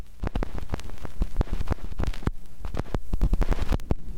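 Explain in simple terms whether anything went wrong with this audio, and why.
Two tiny glitches sound like brief hissy smudges, one at 0.42 s and a slightly longer one from 3.25 to 3.27 s. These are lost LE Audio frames. Bluetooth dropped about 10 ms, then 20 ms, and the receiver patched each gap with a scrambled copy of the sound just before.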